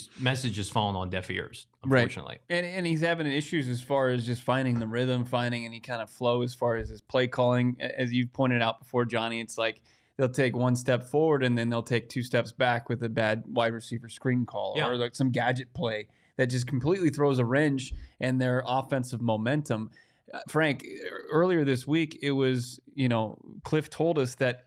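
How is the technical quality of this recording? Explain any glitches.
One glitch stands out in the speech. At 2.81 to 2.83 s, a lost packet rebuilt from error correction: a 20 ms frame was decoded from a low-bitrate copy carried in the next packet. It sounds briefly rough and grainy, with no gap or stretched, repeated sound as plain concealment would produce.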